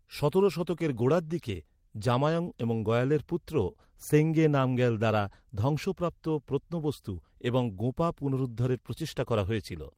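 Speech recording with no audible technical faults.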